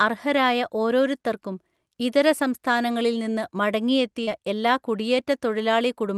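Speech coming over a call path, with the top end rolling off around 12 kHz, which fits an Opus super-wideband-style setting. At 4.23 to 4.29 s there's a short concealed packet loss: roughly 40 ms of audio arrived too late to be decoded, and the receiver papered over about 35 ms of it by stretching the preceding sound before blending back. You hear it as a quick smear or wobble in the speech.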